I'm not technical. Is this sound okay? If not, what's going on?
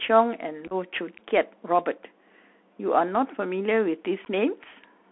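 No. Two problems are audible in this speech clip.

Bluetooth CVSD headset codec, throughout: the speech was squeezed through the basic codec Bluetooth headsets use for calls. It records the sound as a rapid stream of tiny up-or-down steps, and only keeps roughly 250 Hz to 3.4 kHz. That is why everything sounds thin and phone-like, s sounds come out scratchy, loud bright moments distort, and a grainy hiss sits underneath.

Unconcealed Bluetooth headset packet loss, at 0.67 to 0.73 s and at 4.25 to 4.27 s: small chunks of audio travelling between headset and phone never arrived, and nothing filled the gaps. In the first spot about 26 ms went missing in bits scattered across 37.5 ms, the longest single gap 7.5 ms, which points to several lost packets. The second spot lost about 11 ms. The first sounds like a brief rough crackle or chop.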